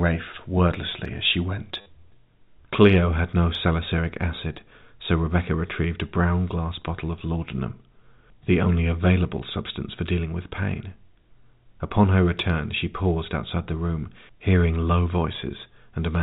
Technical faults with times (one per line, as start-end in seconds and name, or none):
1.81-1.86 packet loss with last packet repeated